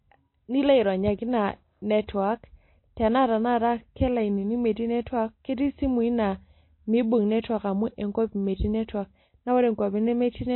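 Throughout the speech, the likely cause is MP3 compression at a very low bitrate, roughly 24 kbps to judge by the damage. Short of bits, the encoder cuts the treble outright, leaving nothing above 4 kHz, and drops weaker frequency detail that flickers in and out from frame to frame. The result is a dull, band-limited sound with plainly audible codec damage: a watery, swirling texture, with consonant attacks smeared.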